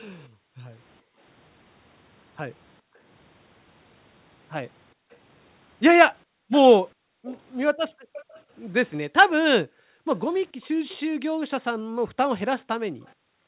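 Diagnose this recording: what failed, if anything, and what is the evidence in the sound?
The failure is in the call processing stage: the background is gated by the echo canceller. The room tone drops by about 40 dB at 0.29–1.19 s, 2.81–3.0 s, 4.94–5.11 s and 6.25–8.13 s, and from 9.2 s to the end of the clip. Each time the far-end loudspeaker was active, the echo canceller's suppressor attenuated the microphone hard. The background ambience vanishes and then returns when the suppressor releases, producing an audible pumping of the noise floor.

There is also an echo leak, a delayed copy of the speech at 6.51–8.39 s (about 20 dB below the speech, roughly 431 ms late), 10.62–10.97 s (about 30 dB down, 436 ms) and 13.07–13.11 s (about 40 dB down, 439 ms). The near-constant delay of about 0.43 s points to acoustic coupling from the loudspeaker back into the microphone. The likely cause is that the echo canceller's adaptive filter did not fully converge on that echo path, so the residual was sent back down the call.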